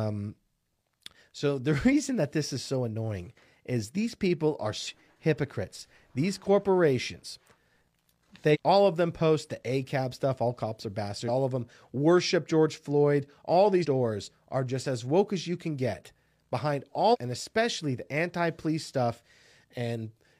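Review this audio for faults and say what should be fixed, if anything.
Damaged data in a compressed stream causes brief glitches at 4.83–4.88, 8.50–8.57, 11.24–11.29, 13.80–13.86 and 17.09–17.16 s, where corrupted frames throw the decoder out of sync. Each shows as a short disruption on a spectrogram and an abrupt waveform discontinuity. Preventing it means checksumming files and transfers, and re-encoding from an intact source.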